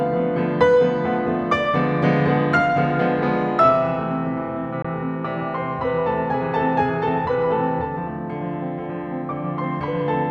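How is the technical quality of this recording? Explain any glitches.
The recording has one glitch, a brief gap in the music. A Bluetooth dropout at about 4.82 to 4.85 s leaves roughly 20 ms of silence. The likely cause is that a wireless audio packet reached the headphones too late and was discarded, and the gap fits a single lost packet. With nothing to play, the output fell silent, then picked up with the following packet. The music resumes as though it had kept running, so the missing moment is simply skipped rather than delayed.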